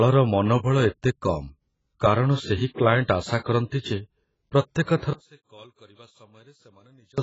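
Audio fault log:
Throughout: AAC compression, likely the cause of the heavy codec damage and the absence of anything above 7.6 kHz, which fits a low bitrate near 16 kbps; unlike a plain low-pass filter, the damage goes beyond the missing top.
5.13–7.18 s: One channel inverted, likely. The level drops by about 29 dB as common content cancels in the mono sum. Unlike a dropout, a quiet residue remains rather than silence.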